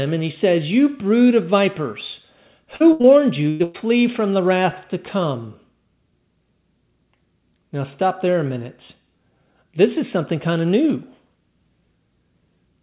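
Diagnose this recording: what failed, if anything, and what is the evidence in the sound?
The network is dropping packets here, so this is short concealed packet loss. At 2.76 to 2.82 s and again at 3.02 to 3.06 s you get a quick smear or wobble lasting roughly 40 ms and then 20 ms. The jitter buffer had nothing to play, so the decoder stretched the last bit of signal to cover the hole and then blended back into the real audio. The second one runs straight on from the burst before it.

The longer dropouts are a burst of packet loss, also on the network side. At 2.92 to 3.02 s about 80 ms goes missing. Then there are two gaps of about 100 ms each, at 3.50 to 3.62 s and 3.64 to 3.76 s, the last one right before "from the wrath to". In each, the decoder repeats the last sound and fades it, which gives a held buzz or a dying hiss, and the audio picks up further along with that chunk gone. The G.711 band limit, with nothing above 4 kHz, is just the codec doing its job.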